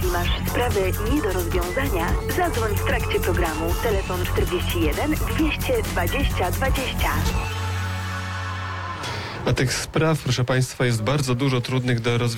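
No technical faults are audible.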